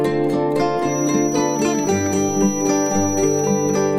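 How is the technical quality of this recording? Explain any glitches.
There's one clear problem. From 0.8 s to the end, a feedback whistle at about 5.9 kHz hangs around 10 dB under the sound, most likely a speaker-to-mic loop sitting right at its ringing point.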